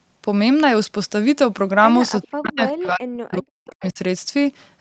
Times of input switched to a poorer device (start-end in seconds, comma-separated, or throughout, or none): none